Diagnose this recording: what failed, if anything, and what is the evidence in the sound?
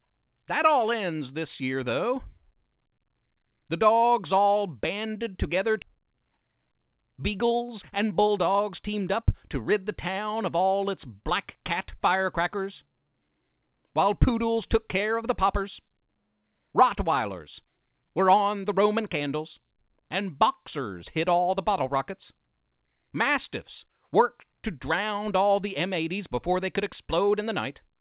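At 5.82 s the audio skips ahead: roughly a second and a half vanishes with no silent gap, unlike a dropout. A network or jitter-buffer discard spliced both sides together.

From 5.85 to 9.72 s, jitter buffer speed-up runs the audio about 14% fast at unchanged pitch, unlike a resampling error, as pitch-period trimming removed about half a second of backlog. The G.711 band limit at 4 kHz remains audible throughout.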